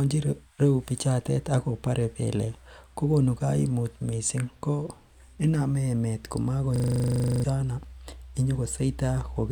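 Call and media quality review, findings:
System hang loop, 6.76–7.44 s. Speech replaced by one 40 ms fragment repeating about 17 times, a rough 25 Hz buzz. Host or audio driver froze; hardware kept replaying a ring buffer of about 40 ms. Roughly 0.7 s of audio lost.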